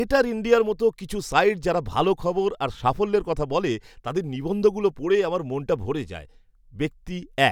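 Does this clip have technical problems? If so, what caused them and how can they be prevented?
No, the speech signal in this clip shows no audible technical faults, so there is nothing to trace to a cause or to prevent.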